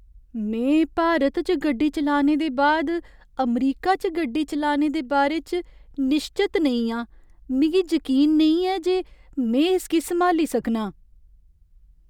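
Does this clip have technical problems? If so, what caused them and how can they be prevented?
No, the speech signal holds steady throughout, with no technical faults to trace or prevent.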